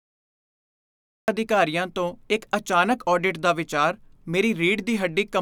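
From 0.0 to 1.28 s there is nothing but digital silence, and then the speech arrives already in progress at "ਅਧਿਕਾਰੀਆਂ ਤੋਂ ਇੱਕ". This is a cut-off start: capture or streaming began late, so the first sound enters mid-flow with no natural onset or fade. Unlike a mid-clip dropout, nothing precedes the gap. Unlike a noise gate opening, the sound isn't clipped at the start of a fresh phrase after a pause but continues an utterance already underway.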